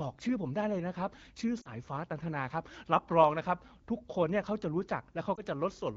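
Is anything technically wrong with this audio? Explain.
Yes. There are lost AMR speech frames in two places. From 1.61 to 1.70 s, about 40 ms of speech is missing, which fits two dropped frames. Radio errors corrupted the frames, so the decoder repeated its last good pitch and vocal tract settings at falling gain. The sound smears briefly and dips, then returns weak or rough for a moment. A shorter dropout from 5.36 to 5.42 s, about 20 ms, gives a brief dip or warble. The wideband coding around it is clear, consistent with AMR-WB at about 12.65 kbit/s.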